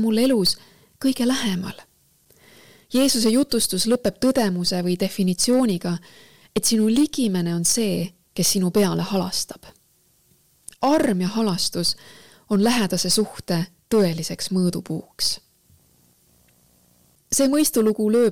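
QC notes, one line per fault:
throughout, hard clipping: the signal is driven about 8 dB beyond what a stage can pass, so roughly 2 percent of samples have their peaks sliced flat. Those squared-off tops generate high harmonics, heard as harsh crackle and fuzz on the louder moments of the sound.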